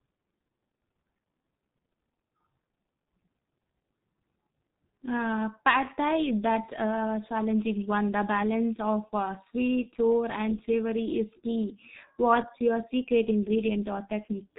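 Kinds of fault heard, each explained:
G.723.1 codec: the speech has been squeezed through an old low-rate telephony codec, which fits about 6.3 kbit/s with 30 ms frames and a slowly updated voice model, so everything above 3.8 kHz is gone, leaving a heavily muffled, hoarse sound with smeared consonants throughout.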